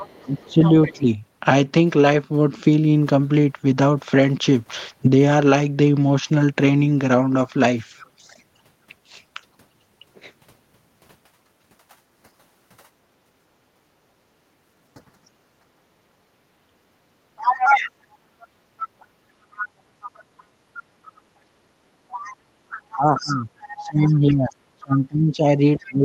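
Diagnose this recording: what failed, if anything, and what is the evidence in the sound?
Other side's voice leaking through, at 0.0 to 0.93 s about 15 dB under the speech, and from 17.37 s to the end at about 5 dB under: likely residual loudspeaker echo the canceller failed to subtract.

Speech suppressed in double talk at 0.24 to 1.06 s, dipping around 20 dB for roughly half a second, and from 22.73 s onward, by around 25 dB: likely call processing attenuating both talkers during overlap.

Background gated by the echo canceller at 13.24 to 13.91 s and 16.49 to 19.26 s, dropping about 15 dB, and at 20.28 to 20.71 s by about 7 dB, as microphone suppression clamps during far-end playback.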